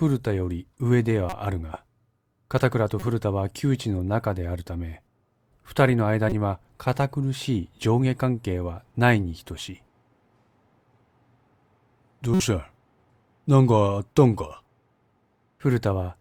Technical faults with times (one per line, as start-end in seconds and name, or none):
1.29-1.33 corrupt frame decoded
2.99-3.08 corrupt frame decoded
6.29-6.34 corrupt frame decoded
12.34-12.40 corrupt frame decoded